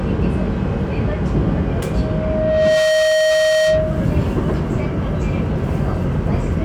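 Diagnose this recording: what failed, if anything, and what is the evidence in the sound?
The failure is loudspeaker feedback squeal, in the acoustic loop between a microphone and a loudspeaker. From 1.92 s to 4.14 s a single tone near 626 Hz rises out of the sound. It swells over roughly a second and settles at about 5 dB above the rest of the audio. The microphone was picking up its own loudspeaker. At 626 Hz the loop gain exceeded one, so that frequency fed on itself until the loop was broken.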